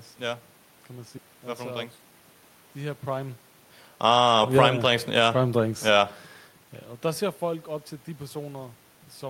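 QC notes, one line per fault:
1.17–1.19 s, skip ahead: right after "kan man", roughly 0.4 s of speech was dropped in transit or by an overflowing buffer, so playback jumps forward with no gap.
1.27–2.50 s, jitter buffer speed-up: the buffer held surplus audio, so short pitch-period pieces, about 0.15 s in total, were cut, making speech run at 111% with unchanged pitch.
3.90–4.82 s, automatic gain falling: the gain control judged the input too loud and gradually lowered gain by about 5 dB, so voice and room noise sink together.
4.18–5.59 s, automatic gain rising: the gain control then judged the input too quiet and raised gain by about 4 dB, so voice and background swell back over more than a second.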